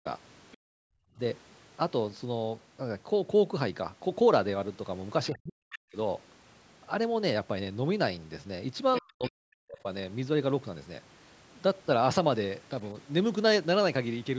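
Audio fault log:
0.52–0.57 s, 5.73–5.78 s, 8.94–9.02 s, 9.24–9.30 s, other side's voice leaking through: the echo canceller likely left some loudspeaker signal in the microphone, so brief faint scraps of a second voice appear, roughly 15 to 30 dB below the talker.
0.57–1.18 s, background gated by the echo canceller: the canceller clamped the microphone while the loudspeaker played, so the room sound drops away, by about 40 dB at its deepest, then returns.
5.30–5.97 s and 9.01–9.87 s, speech suppressed in double talk: with both sides talking, the canceller likely could not separate them and turned everything down, so the talker's voice dips deeply and breaks up.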